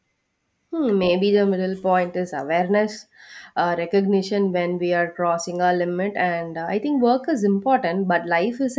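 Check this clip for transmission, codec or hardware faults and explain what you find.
Nothing faulty can be heard anywhere in the speech.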